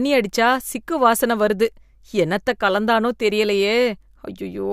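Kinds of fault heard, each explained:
Nothing stood out on listening to this speech recording.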